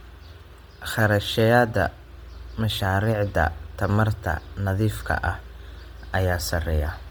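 Throughout, the speech carries a breathy, grainy top end, likely from Bluetooth LC3 compression. Heavy codec damage consistent with about 32 kbps leaves the highs noise-filled.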